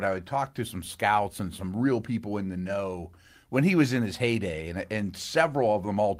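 No technical faults are audible anywhere in this speech recording.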